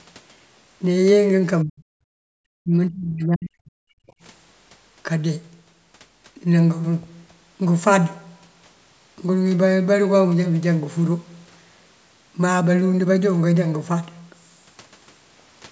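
Speech suppressed in double talk, at 1.64 to 1.86 s and again at 2.62 to 4.08 s: the talker's level collapses by roughly 40 dB, first for about a fifth of a second, then over a stretch of about one and a half seconds where the voice thins and breaks up in pieces. This is likely an echo canceller facing both sides talking at once, unable to tell its own talker from loudspeaker echo, and turning everything down.

Background gated by the echo canceller, at 2.14 to 2.34 s: between the two suppressed stretches, the room sound itself drops by about 37 dB for around 200 ms, then comes back. Here the canceller clamped the microphone hard while the far end was playing through the loudspeaker, and the ambience returns as soon as it releases its hold.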